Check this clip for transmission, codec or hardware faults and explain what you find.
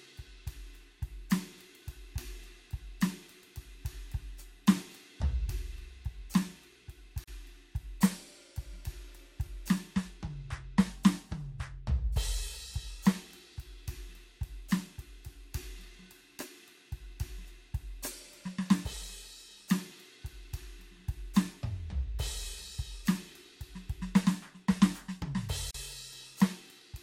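The music has two short dropouts, both a gap at a join of encoded pieces. At 7.24 s and again at 25.71 s, continuous sound cuts to silence for about 36 ms, then resumes exactly where it left off. This points to sections encoded separately and spliced without trimming the encoder's start-up delay and end-of-stream padding. Both stay in as dead air, heard as a brief hole with abrupt, slightly smeared edges.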